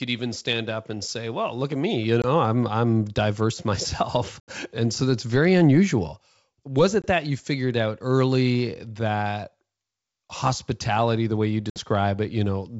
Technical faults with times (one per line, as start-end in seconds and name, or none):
2.22-2.27 packet loss on an ADPCM call
4.40-4.53 packet loss on an ADPCM call
7.02-7.07 packet loss on an ADPCM call
11.70-11.84 packet loss on an ADPCM call